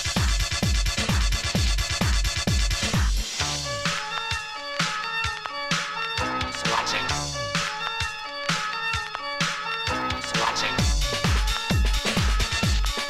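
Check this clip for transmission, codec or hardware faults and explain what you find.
One hardware fault is present: USB whine from 9.85 s to the end of the clip. The bus draws current in 1 ms frames, and that periodic load leaks into the audio through shared power or ground, adding a fixed 1 kHz tone with harmonics, strongest at 12 kHz, roughly 40 dB below the signal. It is a thin, steady whine. A spectrogram shows a ladder of flat horizontal lines spaced 1 kHz apart, brightest at 12 kHz.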